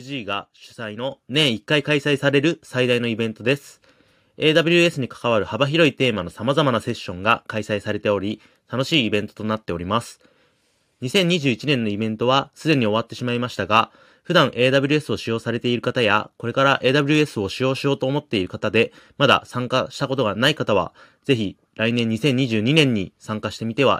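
At 1.11 s the call software judges the microphone too quiet and raises the device's input volume in a single step, a microphone volume stepped up fault of about 7 dB. Because the boost is applied at the input, before any processing, the talker and the room noise both jump louder at the same instant, with no fade between the two levels. The speech leaps forward abruptly, and the background rises with it.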